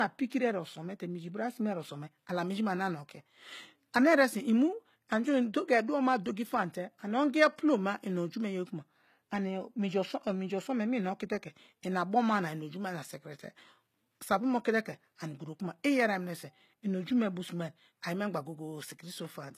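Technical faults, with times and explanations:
Throughout, low-bitrate audio saved at a high bitrate: the speech has nothing above 14.9 kHz and carries the artefacts of a very low-rate codec, which fits an earlier HE-AAC pass near 20 kbit/s. It was likely re-encoded as high-rate MP3, which cannot restore what was discarded.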